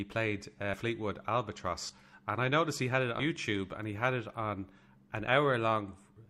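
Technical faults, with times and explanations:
0.73–0.78 s, 1.89–1.94 s (just before "and I noticed he"), 3.19–3.23 s (between "noticed he had it" and "and he had"), 5.27–5.30 s: compressed frames skipped. The speech jumps forward by around a tenth of a second, roughly double that at 3.19 s, in steps that fit 20 ms codec frames. On a spectrogram the formant tracks break abruptly, and the waveform shows a splice.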